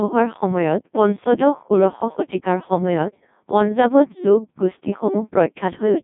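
Speech passed through a Codec 2 vocoder throughout, rebuilt from sine waves, sounding robotic and buzzy, consistent with roughly 1.2 kbit/s, band-limited to 150 Hz–3.6 kHz, nothing above 3.8 kHz.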